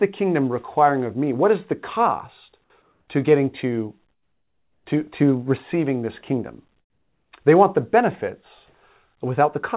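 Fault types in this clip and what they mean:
Comfort noise in place of the background: in two pauses, from 2.82 to 3.08 s and from 4.12 to 4.86 s, the real room sound drops out and a smooth hiss takes over. That's likely the sender going quiet when it detects no speech and the receiver filling the gap with synthetic noise. The first patch sits about 2 dB above the surrounding background, the second about 9 dB below it, and both stay band-limited to 4 kHz like the rest of the call audio.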